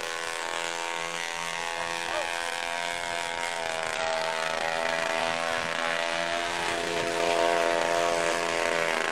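Around 0.38 to 0.43 s, 3.95 to 4.00 s and 5.16 to 5.21 s there's damaged data in the compressed stream. Each time corrupt bytes throw the decoder off, it loses sync and hunts for the next frame header, and you get a short glitch lasting about 50 ms.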